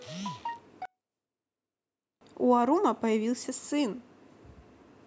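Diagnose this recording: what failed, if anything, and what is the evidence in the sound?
Between 0.85 and 2.21 s the speech drops by about 36 dB, then returns at full level. The likely cause is one channel inverted, from a polarity swap in analogue wiring or a channel-processing stage, heard after a sum to mono. The shared centre content, including the voice, cancels. Unlike a dropout or mute, the level falls deeply rather than cutting to silence, and the edges are tied to the inversion span rather than to packet or buffer timing.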